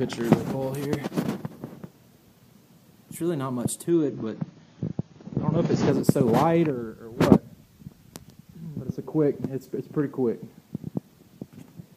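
From 3.90 s to 5.90 s the audio drops to an adaptive stream at a lower bitrate, switching abruptly with no gap and returning just as abruptly two seconds later. During that stretch nothing is present above about 6.9 kHz, so the treble is dull, and coding artefacts become audible. The narrowed band and thicker artefacts point to the player fetching a much leaner AAC encode, on the order of 24 kbit/s, while the connection slowed.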